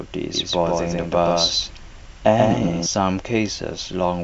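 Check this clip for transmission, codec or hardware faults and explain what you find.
One fault is present: a doubled audio track between 0.34 and 2.86 s. Over that stretch the speech is heard twice. A second full-band copy runs behind the original by about 150 ms, at roughly the same level. The copy carries no decay or room colour, so it sounds like a hard slapback, not an echo. It cuts in and out abruptly at both ends. The likely cause is the signal being captured again through a slower path and mixed back in.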